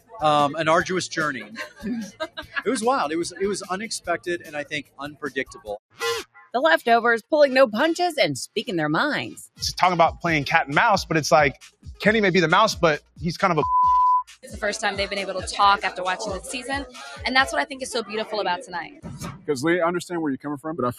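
From start to finish, a noise suppressor meant for speech is applied to music or sounds. It treats steady, sustained parts as noise and pulls them down. The level swings by around 10 dB as it works. Sharp onsets get through. Held material and decays sink beneath them. The result is a pumping, uneven texture that never settles. Tails feel thinned and clipped rather than fading on their own.

On top of that swing, there are seven points where sound is cut by the noise suppressor. The first runs from 0.0 to 0.22 s and drops by about 20 dB. The next, from 1.41 to 2.6 s, dips for about a second in total, again by about 20 dB. From 3.3 to 6.54 s, roughly a second and a half is pushed down, by up to about 20 dB. At 11.54 to 11.87 s the drop is about 20 dB. From 13.0 to 13.2 s it is about 16 dB, and from 14.26 to 14.49 s about 18 dB. The last, from 18.89 to 19.49 s, loses about 15 dB over a fraction of a second. 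In each case the affected sound sinks in level.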